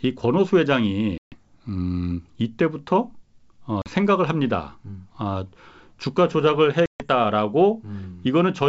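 Three hard-edged holes of silence cut into the speech at 1.18 to 1.35 s, 3.82 to 3.88 s and 6.86 to 7.05 s, losing 140 ms, 40 ms and 140 ms, each ending in brief distortion before settling. This is packet loss on an ADPCM call: lost packets, several in the longer gaps and a couple in the shortest, were filled with silence, leaving the decoder's predictor and step size out of step with the sender's.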